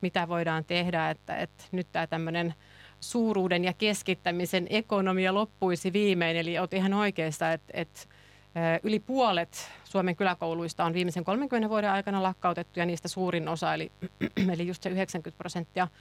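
Mains buzz runs through the whole speech clip, start to finish, sitting roughly 30 dB below the speech. It comes from the 50 Hz power supply getting into the signal path, where something like a dimmer, a rectifier or an unshielded cable injects sharp switching spikes twice per mains cycle. Those spikes spread energy across a long ladder of 50 Hz harmonics reaching well into the kilohertz range, so the result is a steady, raspy buzz under the speech.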